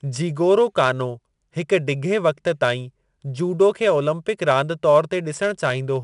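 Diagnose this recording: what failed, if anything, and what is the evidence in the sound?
The codec stage is at fault: 4-bit ADPCM compression puts gritty, level-tracking hiss on the speech throughout, with nothing above 10.6 kHz, which fits a stream of about 89 kbps.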